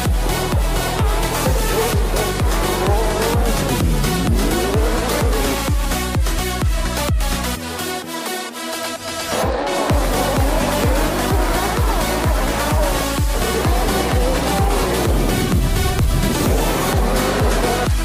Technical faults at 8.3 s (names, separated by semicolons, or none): word clock ticks